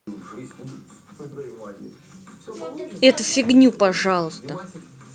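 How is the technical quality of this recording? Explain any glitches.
Nothing here calls for explanation, since the speech comes through without a single glitch to point to.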